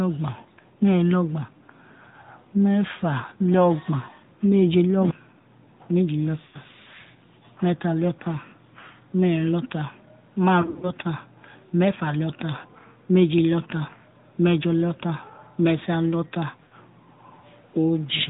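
Across the whole speech clip the AMR narrowband mobile codec is plainly audible. Nothing above 4 kHz survives, and the voice has the buzzy, synthetic quality of a vocal-tract model driven by sparse pulses, which fits a mid-rate mode around 10.2 kbps. Ordinary low-pass filtering would dull the sound without adding this buzz. A generic low-bitrate codec would add its artefacts without this 4 kHz ceiling and the pulse-driven texture.

Lost AMR speech frames first appear at 6.46 to 6.59 s, a loss of about 80 ms, which fits four dropped 20 ms frames. The decoder keeps repeating the last good pitch and vocal-tract settings at falling gain, so the sound smears and sags rather than cutting out. A second, broken-up patch runs from 10.62 to 10.95 s. About 140 ms is lost, scattered over 200 ms, with no run longer than 60 ms, so it warbles in repeated brief dips. The third loss falls at 16.64 to 16.75 s and again covers about 80 ms. 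What separates these from plain dropouts is that there is no hard gap or click. Each gap is filled with a stretched, fading echo of the preceding sound, and the voice returns weak or rough for a moment.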